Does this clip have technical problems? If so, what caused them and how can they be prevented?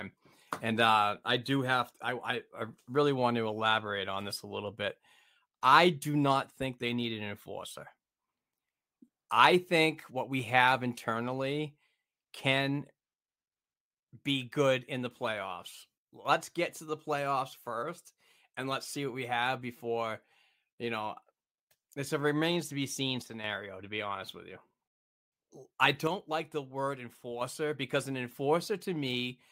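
Yes. The speech drops abruptly by about 6 dB three times: from 15.98 to 16.25 s, after "good in the playoffs" and before "get to the playoffs"; from 23.22 to 23.44 s, after "remains to be seen"; and from 26.07 to 27.41 s, ending just before "because an". This is likely one channel dropping out: with one side of the stereo pair silent, the mono sum loses half its shared content. Secure cables and connectors, and monitor both channel meters during recording.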